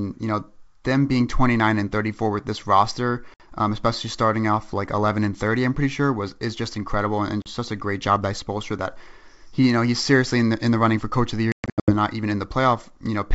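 Packet loss on an ADPCM call hits at 3.34 s, 7.42 s, and 11.52 to 11.93 s. Gaps of 60 ms and 40 ms cut the speech to hard silence. The last burst drops 300 ms in runs up to 120 ms. Each return distorts briefly while the decoder resynchronises.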